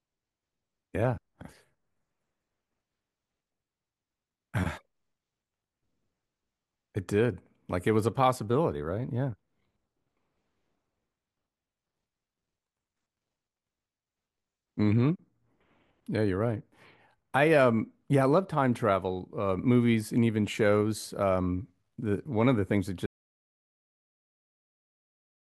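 At 23.06 s there's an audio dropout to silence: the speech cuts out mid-flow into silence, no room tone, right through the end, likely a lost input.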